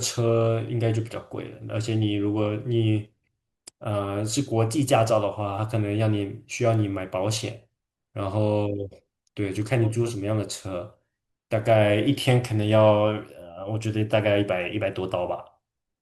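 Speech recording, no technical faults found.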